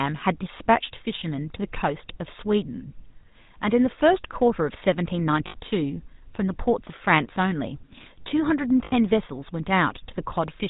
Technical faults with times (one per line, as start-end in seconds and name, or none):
0.00-10.70 GSM full-rate codec
5.46-5.55 lost GSM frames
8.84-8.93 lost GSM frames